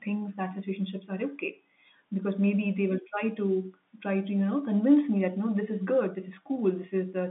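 No technical faults can be heard in the speech. The G.711 telephone coding is working as expected, giving the narrow sound of a phone line that runs from 150 Hz to 3.6 kHz, with nothing above 4 kHz.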